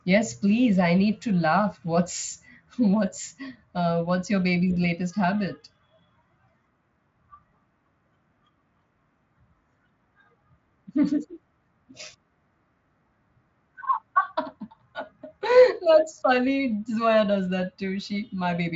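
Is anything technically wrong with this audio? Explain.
No, nothing in this speech recording points to a technical fault. It has passed through the Speex codec, and what can be heard of that is a top end that stops at about 7.6 kHz, with any coding damage no more than faint.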